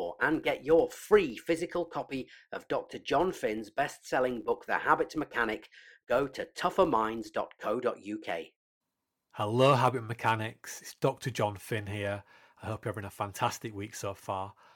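From 0 to 7.75 s, a filter restarted on every block loses its memory at each boundary, so each block opens with a small transient. These repeat as a buzz at 86.1 Hz, which fits a 512-sample block, and it tracks the speech level.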